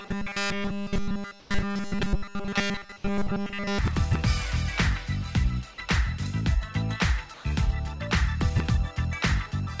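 From the very start to about 3.79 s, essentially the whole stretch turns into a rigid, metallic 200 Hz buzz. That's robotic sound from repeated short buffers, likely caused by audio arriving too seldom and the last slice being looped; a 200 Hz buzz fits a 5 ms repeat.

Twice, at 1.40 to 1.50 s and again at 7.34 to 7.44 s, 100 ms of background gets swapped for flat, featureless hiss. That's comfort noise in place of the background, likely from discontinuous transmission, and it sounds like RFC 3389-style noise. The first patch drops about 5 dB, while the second matches the surrounding level.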